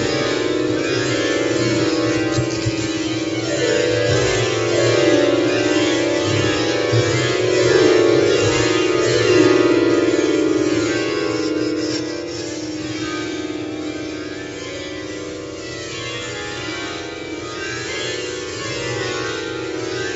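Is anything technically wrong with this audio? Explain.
No, nothing is technically wrong with this audio.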